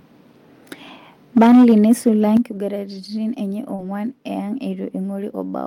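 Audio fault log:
1.37–2.09 s, microphone overload: the loudest syllables turn harsh and crackly, with their peaks flattened. The likely cause is an input level set about 5 dB too hot, so a sizeable share of the waveform tops hit the converter's ceiling and were sliced off.
1.38 s and 2.37 s, microphone volume stepped down: the sound and its background abruptly get quieter, by about 4 dB and then about 9 dB. The call software likely heard the distorted peaks and cut the device's input gain in single jumps.
2.51–2.57 s and 3.78–3.88 s, lost packet rebuilt from error correction: the audio continues without a gap but turns briefly grainy and noisier, for 40 ms and then 60 ms. Lost packets were replaced by the low-bitrate backup copies carried in the following packets, which the decoder played instead.
3.75–3.80 s, short concealed packet loss: a quick smear or wobble where about 40 ms of audio never arrived. 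The receiver filled roughly 31 ms of it by extending the preceding sound, then crossfaded back into real audio that was itself rebuilt.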